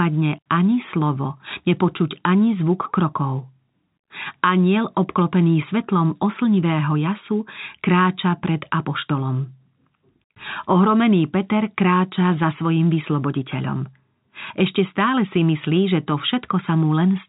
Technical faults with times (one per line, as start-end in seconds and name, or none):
none